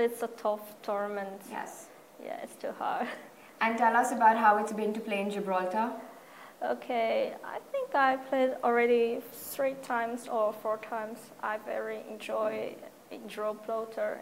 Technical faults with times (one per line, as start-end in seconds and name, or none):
none